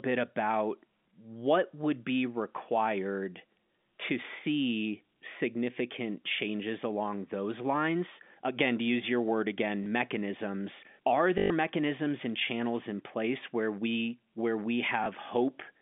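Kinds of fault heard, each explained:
Packet loss with last packet repeated: Short blips and a robotic stutter. A single brief blip comes at 9.84 s after "to use your word" and another at 15.04 s after "where we where we". A 120 ms buzzing stutter runs from 11.38 to 11.5 s, just before "mechanisms and channels in". The receiver kept replaying its last packet until new audio arrived. A repeat seldom lines up with the waveform at the join, and the longer run buzzes near 50 Hz, which fits 20 ms packets.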